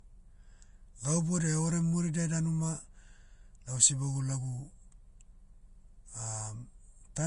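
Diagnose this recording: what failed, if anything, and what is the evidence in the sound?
The codec stage likely failed: the speech shows plainly audible Vorbis compression throughout, with nothing above 10.5 kHz and a hissy, grainy treble. The coarsely quantised treble turns into noise of similar energy, which fits roughly 31 kbps. A plain low-pass filter would leave the remaining treble clean.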